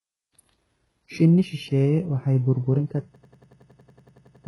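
Throughout the speech, the treble is bright but synthetic and stops above 11.5 kHz. S sounds come out gritty and metallic because the upper band is rebuilt from copied lower bands and its harmonics don't line up. That points to HE-AAC compression at a very low bitrate, likely around 12 kbps. It differs from plain low-pass damage, which sounds dull rather than falsely bright.

From 3.16 s to 4.46 s, just after "waxay burburin", there is a system hang loop. The output froze while the hardware kept replaying one 92.9 ms slice, which fits a 4096-sample buffer. It repeats exactly 14 times as a machine-gun stutter at 10.8 Hz. Unlike network dropouts, every repeat is identical and evenly spaced.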